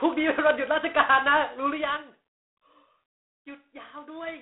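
Speech runs the whole way through G.726 ADPCM coding: the band sits at 250 Hz to 3.6 kHz, nothing above 3.9 kHz, and a harsh, rasping hiss rises and falls with the speech level, which fits 24 kbit/s. Steady line noise would stay put instead.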